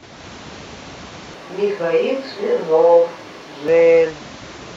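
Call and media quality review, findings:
Speech turns roomy and hollow, thinner low end, 1.34 to 3.68 s, abrupt in and out; level barely changes, faint room noise about 35 dB under. Switch to a distant microphone, likely: close-mic feed dropped, far pickup substituted.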